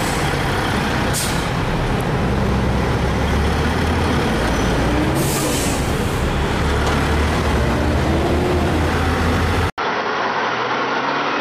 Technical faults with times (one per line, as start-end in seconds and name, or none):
9.70-11.41 input switched to a poorer device